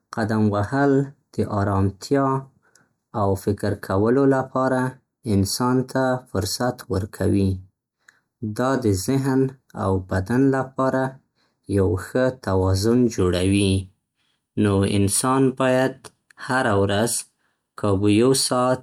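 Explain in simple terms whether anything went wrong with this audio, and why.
Something did go wrong here: from the very start until about 13.18 s, the speech has channel delay (comb filtering). One side of the stereo pair runs a tiny fraction of a millisecond behind the other, and when the two get folded into mono they partly cancel at evenly spaced pitches, the first around 3 kHz. That's why it sounds hollow and a bit phasey, like talking through a tube, until it clears up after 13.18 s.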